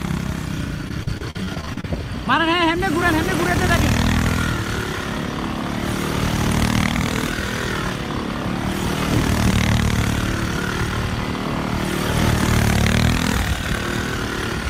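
Repeated packet loss (robotic sound) runs from 0.88 to 1.85 s. A rapid string of short dropouts hits the stream, the longest about 42 ms. Each hole is bridged by stretching the sound just before it, and roughly a quarter of this stretch is concealed rather than real. The quick succession of patched gaps gives a choppy texture with fragments missing.

A drift correction step occurs twice, from 6.92 to 7.73 s and again from 12.87 to 14.15 s. Each time, playback jumps 5.65% faster and rises about 95 cents, close to a semitone. This is likely a clock-matching routine abruptly changing the playback rate to rebalance its buffer, heard as a sudden, brief detuning.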